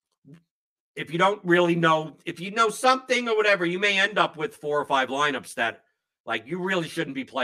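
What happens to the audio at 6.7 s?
At 6.7 s the speech has channel delay (comb filtering), present across the whole clip. One channel lags the other by about 10 ms before both are summed to mono. Shared content cancels at evenly spaced frequencies, starting near 40 Hz, leaving the voice hollow and phasey.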